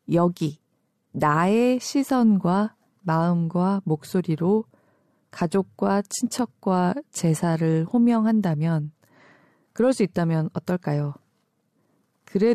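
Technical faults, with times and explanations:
No technical faults can be heard in the speech recording at any point.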